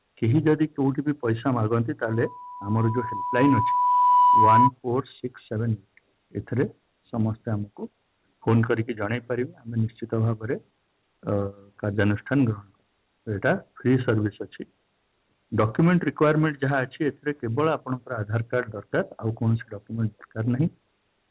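From 2.08 to 4.71 s, a 986 Hz tone swells over about two seconds to roughly 10 dB above the sound. This loudspeaker feedback squeal comes from a microphone re-amplifying its own loudspeaker.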